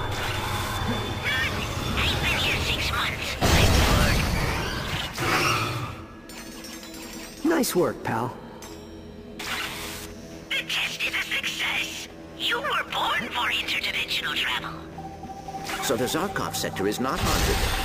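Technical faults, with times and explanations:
Throughout, imaging from sample-and-hold upsampling: each sample was repeated without smoothing, fitting a 22 kHz source raised to 48 kHz. A mirrored spectrum copy spans 11 kHz to 22 kHz, about 16 dB down, heard as metallic fizz; spectrograms show an inverted reflection, waveforms stair-steps.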